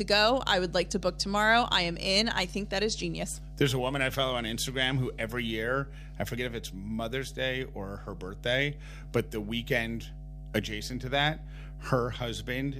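Speech runs over mains hum for the whole clip: a steady 50 Hz tone roughly 15 dB below the voice, likely from a ground loop. Its fixed pitch distinguishes it from shifting, unpitched rumble.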